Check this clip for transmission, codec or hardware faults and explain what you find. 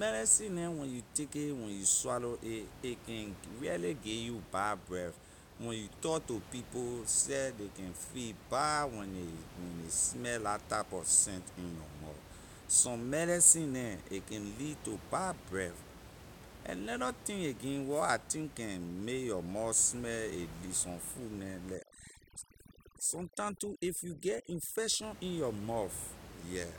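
One fault stands out, overdone noise removal, from 21.75 to 25.03 s, right after "some food" and ending before "in your". A noise reduction stage was set far too aggressively, so any frequency band sitting near its noise estimate gets pulled right down or shut off, taking the quieter parts of the speech with it. The room noise, about 17 dB below the speech elsewhere, drops and breaks up into twinkling artefacts.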